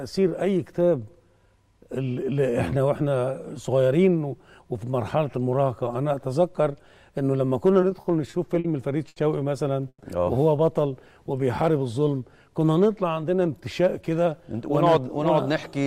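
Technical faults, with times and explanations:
7.81 to 8.66 s, repeated stalls (stutter): The jitter buffer ran dry five times in under a second because packets kept turning up late or slower than playback. Each time the receiver kept the last bit of sound going to bridge the wait, about 130 ms in total, with the longest hold around 50 ms. Roughly 15% of that stretch is patched-in sound, so it drags and stutters even though nothing is actually lost.
9.08 to 9.18 s, short stall from a late packet: One packet wasn't there on time, so the buffer emptied and the receiver stretched the last sound for about 80 ms until it showed up. Playback then picked up exactly where it left off, so nothing is lost. What you hear is a sound held a touch too long, with a slight buzz or dip, and everything after it sits about 80 ms later than before.
9.88 to 10.02 s, call audio freeze: The sound stops moving forward. 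It holds as a brief buzzy continuation of what came just before, drops to silence for about 50 ms, and then resumes from the same point. About 120 ms of filler is inserted with nothing skipped, so the rest of the audio is pushed about 120 ms later. The likely cause is packets held up on the network long enough for the jitter buffer to run empty.
13.41 to 15.85 s, jitter buffer speed-up: The buffer was holding more audio than it wanted, so the receiver shaved out tiny slices, a pitch period or a few at a time, over and over. That removes about 150 ms across this stretch and runs it at about 105% speed with the pitch unchanged. The pacing sounds hurried rather than higher.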